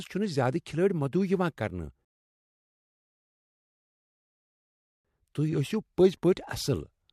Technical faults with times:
2.05-5.05 rebuffering stall

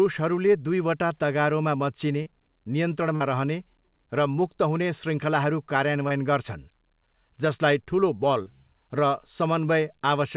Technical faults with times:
2.22-2.28 short concealed packet loss
3.16-3.22 short concealed packet loss
6.08-6.12 short concealed packet loss
8.42-8.48 short concealed packet loss

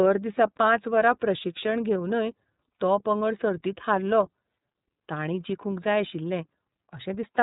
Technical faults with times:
0.00-7.43 iLBC codec
2.75-2.78 lost iLBC frames

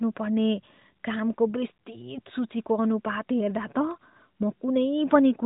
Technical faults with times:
none

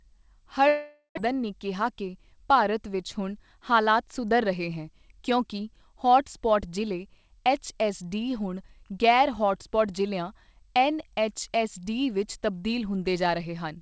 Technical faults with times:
0.68-1.28 long network dropout
1.81-2.56 jitter buffer speed-up

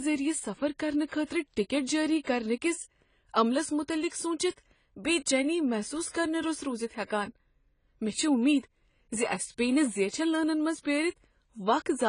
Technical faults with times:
0.00-12.08 AAC compression

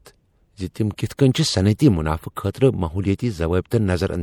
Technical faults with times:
0.00-4.23 MP3 compression

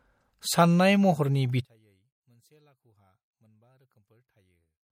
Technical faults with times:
0.00-4.91 MP3 compression
1.65-4.91 one channel inverted

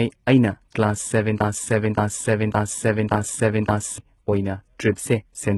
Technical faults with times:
0.00-5.58 HE-AAC compression
1.40-3.98 broken-record loop

